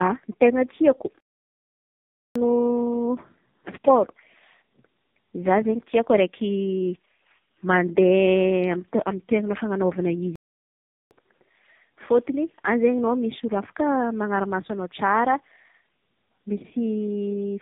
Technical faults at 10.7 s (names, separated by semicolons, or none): tandem speech coding; playback stall